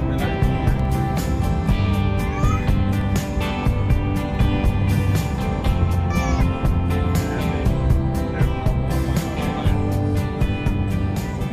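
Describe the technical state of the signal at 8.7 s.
At 8.7 s the signal is intact, with no audible technical fault at that moment.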